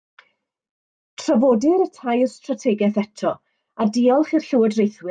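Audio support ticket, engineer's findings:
Listened through the speech recording and nothing stood out as a fault.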